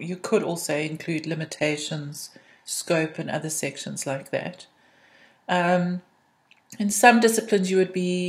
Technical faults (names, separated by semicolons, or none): adaptive stream at a lower bitrate